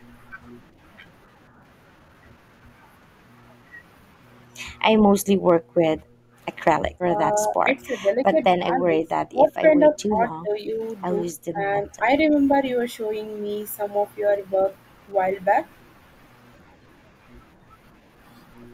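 Background gated by the echo canceller occurs at 5.0 to 5.12 s, a dip of about 9 dB, and at 5.59 to 6.36 s, about 13 dB for roughly half a second. The room sound sinks, returning once the canceller releases the microphone.

Speech suppressed in double talk, likely from the canceller mistaking the talker for loudspeaker echo, breaks up the voice itself from 7.01 to 10.78 s, around two seconds chopped by up to about 20 dB, and briefly from 11.53 to 12.32 s, about 10 dB.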